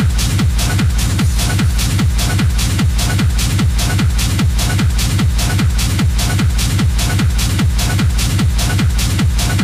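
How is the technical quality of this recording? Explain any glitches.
The recording has one fault, mild hard clipping throughout. Peaks exceed the signal path's limit by about 2 dB and are cut flat. Roughly 2 percent of samples are affected, giving a brief crackle on the loudest moments.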